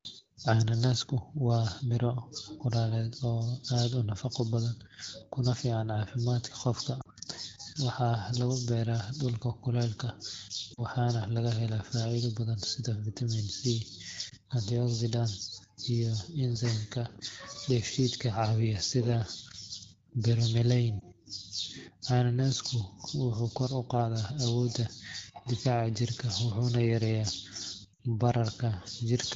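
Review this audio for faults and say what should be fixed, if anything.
Lost AMR speech frames occur at 7.01–7.07 s, 10.73–10.82 s (just before "laga helaa"), 14.29–14.35 s, 20.99–21.05 s, and 27.93–28.00 s. At each, the decoder rejected corrupted frames and filled the gap by repeating the last good pitch and vocal-tract parameters at shrinking gain. The single-frame drops at 14.29 and 20.99 s are brief dips or warbles of about 20 ms. The 40 ms gaps at 7.01 and 10.73 s drop to near silence within the two frames. The 60 ms run at 27.93 s drops to near silence before the audio returns weak or rough for a moment. The wideband coding itself sounds clear with only light coding damage, consistent with a 12.65 kbit/s mode. To prevent these dropouts, improve radio link quality or strengthen channel error protection.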